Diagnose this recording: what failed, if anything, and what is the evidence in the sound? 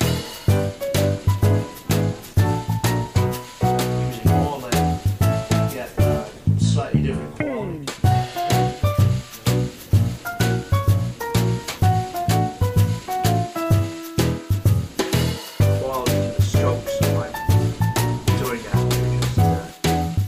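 Nothing failed; no fault is audible anywhere in the recording.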